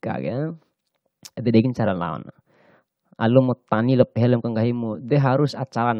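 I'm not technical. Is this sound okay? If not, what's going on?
Yes, it sounds fine; nothing here needs fixing.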